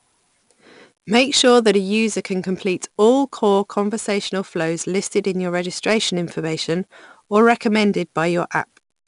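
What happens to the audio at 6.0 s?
Throughout the clip, including 6.0 s, 4-bit ADPCM compression stores each sample as a coarse predicted step, so gritty hiss follows the speech's loudness and nothing sounds above 10.6 kHz.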